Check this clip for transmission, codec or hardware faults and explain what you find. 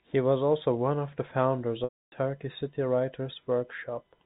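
There's one real fault here, a packet loss with pitch repetition, over the telephone-band G.711 sound.

Right after "one of the founders", from 1.84 to 2.12 s, about 280 ms drops out. The receiver repeats the last pitch period, giving a brief buzzy hold that fades to silence before the speech cross-fades back in.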